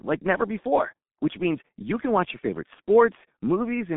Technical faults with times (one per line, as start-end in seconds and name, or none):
0.00-3.96 G.723.1 codec